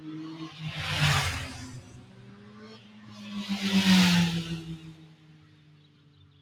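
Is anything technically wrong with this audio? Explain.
Yes. A speech-oriented noise suppressor was left running on non-speech sounds throughout. It treats steady content, ambience and decays as noise, so gain swings by roughly 15 dB. Onsets pass while sustained parts and tails sink, giving a pumping, thinned-out character.

The suppressor also cut specific sounds from 2.04 to 3.19 s and from 4.95 s to the end. It judged these sounds to be noise and pulled them down by up to about 5 dB, so their level sags.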